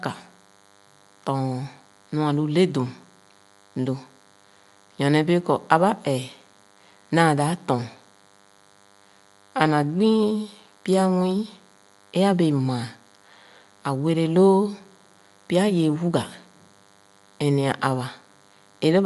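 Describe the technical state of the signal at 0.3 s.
DECT cordless phone buzz is present at 0.3 s and runs through the whole clip. A nearby DECT handset or base fires a radio burst every 10 ms, which the audio circuitry rectifies into a thin, steady 100 Hz buzz rich in harmonics, sitting faint under the speech, roughly 35 dB down.

At 0.3 s, and throughout, the speech also carries plainly audible codec damage, likely from Bluetooth LC3 compression. Nothing is left above 11.6 kHz, and the upper band has a breathy, grainy texture where noise has been filled in. That fits 10 ms frames at around 48 kbps.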